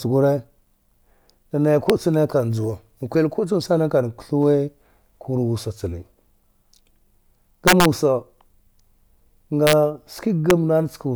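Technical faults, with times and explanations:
1.90 s, 7.68–7.85 s, 9.67–9.73 s and 10.50 s: integer overflow. Loud speech peaks exceed the largest integer value. They wrap to the opposite sign instead of being limited. Each wrap jumps across the full range. This gives sharp, violent cracks, worst at 7.68 s, about 5 dB over.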